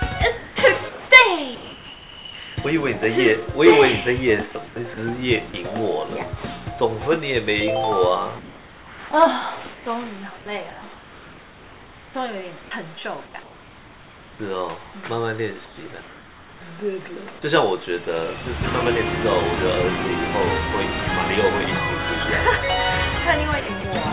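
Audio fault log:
0.38–2.57 s, 4.52–5.54 s and 23.6–23.84 s, sound chopped by the voice detector: The sound turns choppy. About 1.4 s, 0.18 s and 0.12 s are replaced, likely because the sender's voice detector kept toggling transmission and the receiver filled the gaps with comfort noise.
8.39–16.61 s, comfort noise in place of the background: The natural background gives way to flat, featureless hiss for about 4.2 s in total across this stretch. The sender likely judged these pauses silent and stopped transmitting, so the receiver substituted generated noise shaped only roughly like the real background.
10.7–10.82 s, sound dropped by the voice detector: The sound briefly vanishes into steady noise for about 120 ms before returning, with roughly 50 ms of real sound missing. The detector likely mistook this quiet portion for background and stopped sending, so comfort noise filled the hole.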